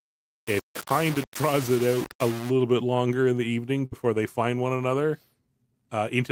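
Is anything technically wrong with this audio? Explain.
Yes, two faults are audible.

From 0.00 to 2.50 s the speech sounds grainy and harsh. This is likely low bit depth without dither: rounding consistent with about 4 bits leaves signal-tracking error only about 15 dB down.

From 3.85 to 3.95 s there is a burst of packet loss. The last sound is held and faded for about 62 ms, then resumes with 60 ms missing.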